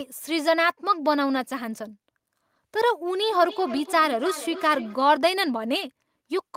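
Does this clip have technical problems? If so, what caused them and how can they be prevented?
Yes. From 3.22 s to 5.01 s the speech comes back on itself as a trailing repeat about every 300 ms, peaking at about 14 dB below the direct speech. This is feedback echo between two devices: two devices in the same room are on the call, one plays the other's incoming audio aloud, and that microphone picks it up and sends it round again, where neither echo canceller can remove it. To prevent it, mute the microphone and speaker on all but one device in the room.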